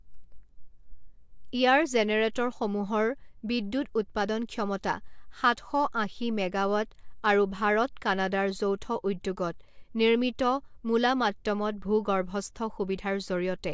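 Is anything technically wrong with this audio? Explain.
No, nothing in this speech recording is technically wrong. A careful listen turns up no fault to report.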